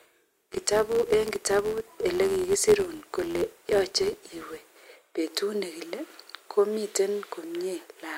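From 0.0 to 4.72 s, a filter restarted on every block: it discards its state at each block boundary, so every block begins with a small transient. The result is an 86.1 Hz buzz that tracks the speech level, which fits a 512-sample buffer.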